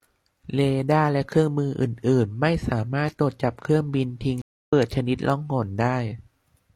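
A stream reconnect occurs from 4.42 to 4.73 s. The connection dropped, leaving 271 ms of silence while the player reconnected and restarted its decoder mid-stream, so the speech picks up roughly 150 ms further on, with that stretch simply missing.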